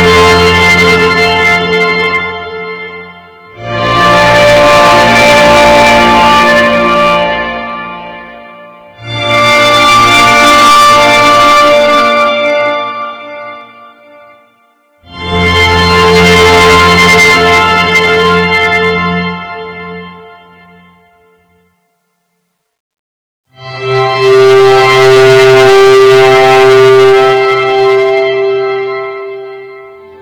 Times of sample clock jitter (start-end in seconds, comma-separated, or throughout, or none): none